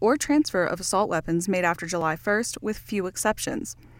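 Speech, marked by two blocks of digital silence, at 2.01 s (about 2.7 ms, consistent with a 128-sample buffer) and 3.19 s (0.15 ms), each an unfaded dropout to silence heard as a tick or dip.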